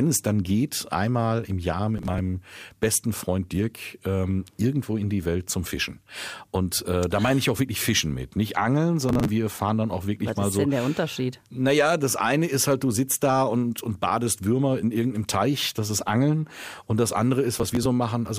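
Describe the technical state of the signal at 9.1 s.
At 9.1 s the processor falls behind and misses a run of buffer deadlines, about thirty of them, with each block that fails to arrive simply skipped. The small gaps, which point to buffers of around 5 ms, have hard edges, so from 9.09 to 9.29 s the speech is torn by a burst of processor overload crackle, a gritty tearing that clears just before "wir fahren dann auch".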